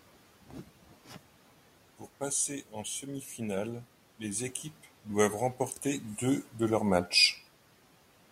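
Speech cut by the noise suppressor at 0.9 to 1.16 s in this speech recording: mistaking quiet speech for noise, the suppressor dipped it by about 10 dB, swallowing roughly a tenth of a second, while room noise sits about 21 dB below the speech.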